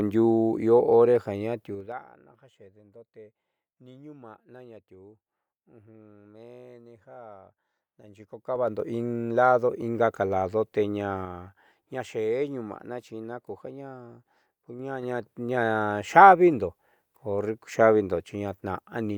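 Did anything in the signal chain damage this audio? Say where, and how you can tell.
Yes. Zipper noise comes from a digital gain stage, likely one updating its level once per processing buffer without interpolation. Ticking rides on the speech at 1.66–2.05 s (falling about 20 dB, just before "ja xeedendo te"), 8.02–8.83 s (rising about 20 dB), 11.14–11.95 s (falling about 10 dB, after "lado ingaka lado teña") and 14.68–15.49 s (rising about 10 dB). Each jump is 3 dB, at roughly 20, 10, 4 and 4 steps per second. The waveform envelope shows staircase edges, and the spectrogram shows thin full-height vertical lines at each step.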